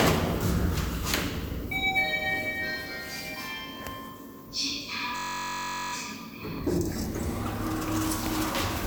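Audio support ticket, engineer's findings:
System hang loop, 5.16 to 5.93 s. Steady buzz at about 46.9 Hz: one 21.33 ms slice repeats 36 times while the computer or driver is frozen and the ring buffer keeps cycling, which fits a 1024-sample buffer. Essentially no audio dropped afterwards.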